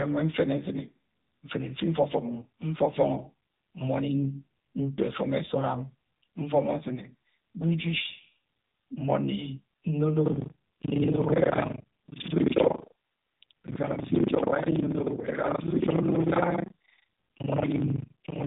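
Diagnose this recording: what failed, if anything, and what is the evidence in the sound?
The whole recording has passed through the AMR narrowband mobile codec, so the fault sits at the codec stage. Nothing above about 3.8 kHz survives, and the speech has the plainly audible buzzy, synthetic edge of a vocal-tract model driven by sparse pulses in each short subframe. That degree of damage fits AMR-NB at a low mode such as 7.4 kbps. The codec rebuilds an approximation of the voice rather than preserving the waveform.

From 10.24 s to the end, a robotic rattle at 25 Hz rides on the speech and is present only while sound is present. This is buffer tearing at the driver or buffer stage. The writer and the hardware reader of the ring buffer have slipped, so they cross inside every period. The 25 Hz rate points to a 40 ms period. Somewhat under half of each period replays audio from around 70 ms earlier, with hard joins on both sides.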